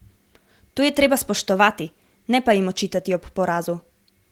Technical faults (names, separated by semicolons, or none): none